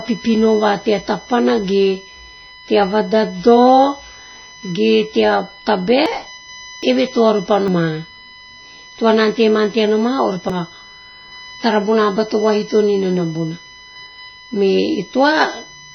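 A steady USB whine runs under the speech from start to end: a fixed tone at 1 kHz, strongest at its 2 kHz harmonic, about 20 dB below the speech. The bus's 1 ms frame current is leaking into the audio path, and a spectrogram shows thin, unbroken horizontal lines at those frequencies.

Throughout, the speech also sounds watery and swirly. This plainly audible damage is likely MP3 compression at a very low bitrate, around 24 kbps. The encoder drops the treble and switches weak frequency lines on and off, which appears on a spectrogram as a hard ceiling with patchy, flickering detail below it.

At 6.06, 6.83, 7.68 and 10.50 s, the speech skips forward, and there is no gap of silence. These are likely dropped buffers from an overrun, each losing about a tenth of a second except at 6.83 s, where about a third of a second is lost. A waveform shows an abrupt discontinuity at each joint, and a spectrogram shows a thin vertical stripe.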